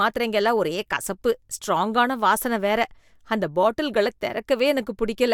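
From 3.31 s to 4.30 s the speech takes on a low buzz at about 46.9 Hz, with its pitch unchanged. This is a block size mismatch (truncated): one stage hands over blocks longer than the next accepts, so each block's tail is discarded, which fits 1024-sample writes.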